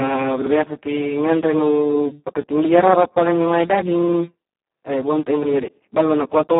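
The whole recording carries Speex codec damage. The speech is squeezed into a 200 to 3400 Hz line band with nothing above 3.8 kHz. At a very low bitrate the excitation is starved of bits. So the voice sounds hoarse, noisy and close to robotic throughout.

At 5.43 s, just after "e bonte' a", a repeated buffer occurs. Fresh audio arrived late, so the device replayed its last 46 ms block once. That fits a 2048-sample buffer. It is heard as a brief stutter with hard joins, lasting until 5.48 s.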